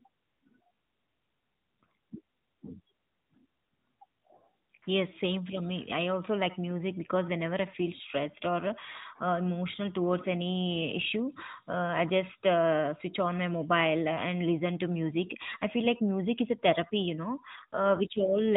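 Right after "a therapy you know", from 17.56 s to the end at 18.56 s, the speech turns rougher and more synthetic, with no gap and no change to its narrow telephone band. This is an AMR rate drop, which fits a step down from 12.2 to 5.9 kbps.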